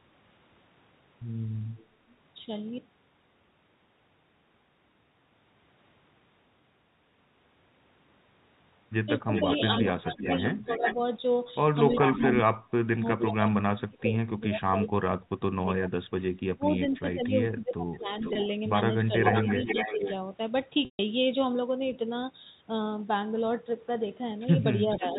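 Telephone-band speech, carried cleanly at 64 kbps G.711 mu-law, has a delayed copy of the voice trailing behind it. The copy is faint, about 30 dB down, at 1.77–1.86 s. It is far stronger, about 5 dB below the speech, at 9.33–14.03 s and 18.21–20.14 s, and about 10 dB down from 24.94 s to the end. That is echo leak, with delays of 376 ms in the first two stretches and 487 ms in the last two, likely from a far-end loudspeaker whose echo canceller let its microphone pickup return. Across 9.25–20.02 s the voice dips and breaks up for roughly five seconds in total, sinking by as much as about 35 dB. There is a briefer dip of about 10 dB at 24.98–25.15 s. This is speech suppressed in double talk, likely as the canceller turns down its own talker along with the loudspeaker echo while they overlap. A short buzzy hold at 18.33 s bridges 20 ms of packet loss with pitch repetition. A longer held-then-fading gap at 20.85–20.99 s covers 140 ms lost, patched by repeating the last pitch period.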